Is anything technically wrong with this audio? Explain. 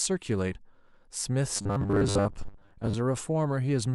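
Yes, a few things. There's damaged data in the compressed stream, heard twice: a short blip from 0.51 to 0.53 s and another at 3.16 s. Some of the stream's bytes were wrong there, so the decoder couldn't read those frames, lost its place and had to hunt for the next valid frame header. That's why each spot sounds like a quick chirp, squawk, click or short hole.

From 1.56 to 2.95 s the speech turns into robotic sound from repeated short buffers, a stiff metallic buzz at 100 Hz that still roughly tracks the talking. A 100 Hz buzz fits the playback re-looping a 10 ms chunk over and over, and the likely cause is audio arriving too slowly, so the software filled the gaps with repeats. Around half of that stretch seems to be repeated material, with the real audio in between skipped.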